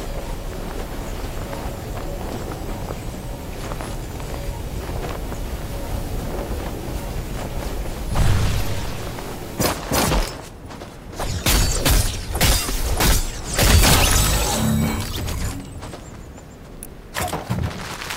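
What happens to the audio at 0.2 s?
Nothing goes wrong at 0.2 s; the audio is intact there, with no dropout, click or distortion.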